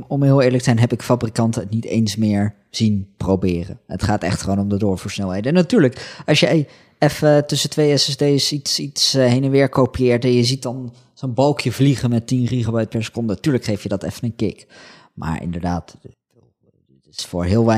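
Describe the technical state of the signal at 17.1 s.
At 17.1 s the speech sits inside a span from 16.14 to 17.19 s where it drops by about 20 dB and turns faint, likely from one channel inverted, so the common centre cancels when summed to mono. The waveform shrinks sharply, and the spectrogram loses most of its energy.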